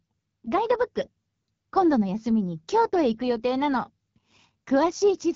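Throughout, AMR wideband (HD Voice) codec damage leaves the speech raspy and rough, fitting a low mode near 8.85 kbit/s; unlike narrowband coding, content reaches 7.3 kHz.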